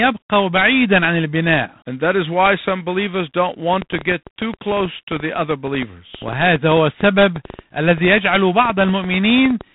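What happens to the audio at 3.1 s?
At 3.1 s the speech is running through G.726 ADPCM coding, as it does for the whole clip. Each sample carries only a coarse difference from an adaptive prediction, which fits 24 kbit/s. The result is a plainly audible rasping hiss that tracks the speech level, and nothing passes above 3.9 kHz.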